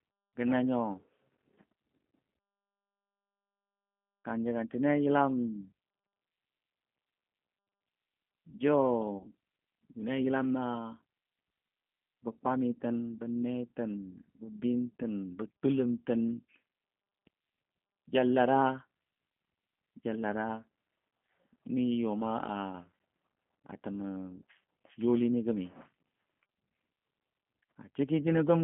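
From start to finish the speech sounds slightly rough and synthetic, confined to a narrow band of roughly 150 Hz to 3.4 kHz. This is G.729 codec damage: speech rebuilt from a vocal-tract model and sparse pulses, a rate that fits an 8 kbit/s G.729A link.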